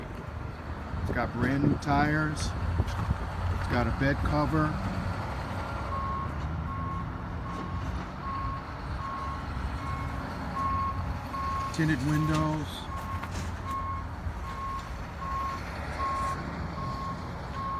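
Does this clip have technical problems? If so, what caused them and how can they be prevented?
No, there are no technical faults.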